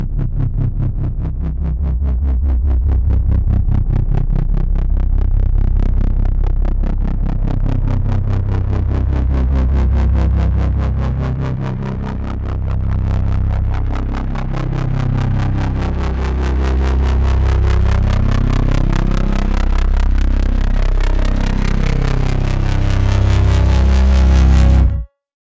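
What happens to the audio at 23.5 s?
Nothing goes wrong at 23.5 s; the sound plays through that moment intact, with no dropout, click or distortion.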